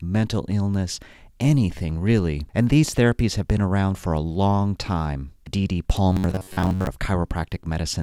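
Robotic sound from repeated short buffers runs from 6.12 to 6.87 s. Fresh audio likely arrived too seldom, so a fragment of about 10.7 ms was replayed to fill most of the gap. That fixed loop imposes a rigid, metallic buzz near 93.8 Hz.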